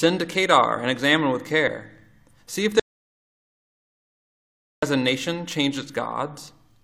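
A short piece of audio with two faults. At 1.68 to 1.70 s, an overlap between stream segments removes about 25 ms, fitting a 6-second segment boundary. The result is a small skip, visible as a sudden waveform step. From 2.80 to 4.83 s, an audio dropout to silence cuts the sound for about 2.03 s, likely from a lost input. The waveform goes flat and the spectrogram shows a fully blank band.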